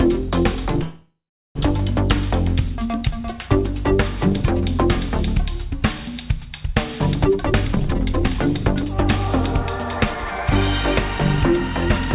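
From 0.83 to 1.58 s there is a call audio freeze: the last sound is stretched into a fading buzz that ends in about 0.4 s of silence, then the audio resumes where it stopped. The likely cause is delayed packets draining the jitter buffer. The waveform shows a decaying smear, then a flat line.

From 7.25 to 8.35 s a jitter buffer speed-up plays the audio at 141% speed with unchanged pitch, trimming roughly half a second of pitch periods to cut delay. It sounds rushed. A spectrogram shows compressed timing but steady harmonic spacing, all below the 4 kHz ceiling.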